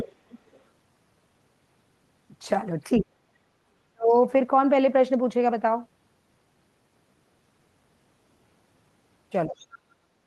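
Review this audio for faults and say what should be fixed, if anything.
The other side's voice leaks through at 0 to 0.13 s, 0.3 to 0.61 s and 9.58 to 9.66 s. A second voice sits under the speech. The first scrap is fairly loud, about 10 dB below the talker. The later two are faint, roughly 25 to 30 dB down. This is likely loudspeaker sound reaching the microphone that the echo canceller failed to remove.

Speech is suppressed in double talk at 2.99 to 3.42 s, 3.92 to 4.13 s, and from 9.46 s to the end. The talker's voice dips sharply in these spans, by as much as 40 dB at the deepest point. The first dip lasts around 400 ms and the second around 200 ms. The last one overlaps the leak near 9.6 s. This is likely the echo canceller being unable to separate the talker from the echo, so it turned both down.

Better echo-canceller tuning with proper double-talk detection, or a headset in place of a loudspeaker, would prevent both faults.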